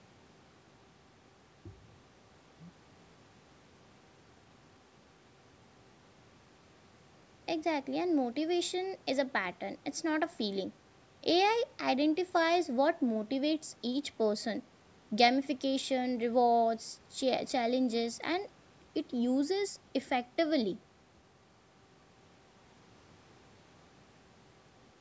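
The speech carries no technical faults, its only shaping coming from normal call microphone processing, which removes the lowest bass and leaves nothing above 8 kHz.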